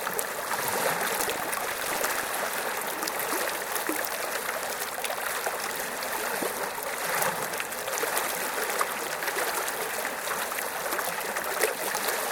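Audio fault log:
1.16–2.31 s, buffer tearing. A robotic 25 Hz rattle rides the sound. Roughly a tenth of each buffer replays audio about 70 ms stale, hard-joined.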